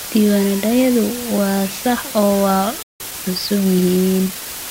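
Throughout, the speech has been reduced to low bit depth with dither, about 4 bits, with random dither added before rounding. The coarse quantisation error becomes a constant, even hiss only about 10 dB below the speech, with no harsh distortion.

At 2.83 s a playback stall occurs, likely because the player ran out of buffered data or its thread was blocked. The output drops to silence for about 173 ms, cutting the speech off mid-flow, and resumes at 3.00 s.

From 3.00 to 4.56 s the player works off its backlog with time-compressed catch-up, cutting and cross-fading small pieces to run at 1.1 times speed. The speech sounds hurried but keeps its normal pitch.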